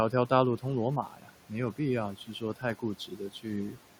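Noise suppressor artifacts run through the whole clip. The suppressor pulls steady room noise down by about 12 dB, so the background pumps between phrases.

Speech cut by the noise suppressor occurs three times. At 1.07 to 1.30 s, about a fifth of a second is lowered by up to about 12 dB. At 2.15 to 2.63 s and 2.99 to 3.45 s, roughly 150 ms each drops by up to about 11 and 9 dB. Quiet speech sounds mistaken for the room noise, which sits about 18 dB below the speech, so those parts come out swallowed and faint.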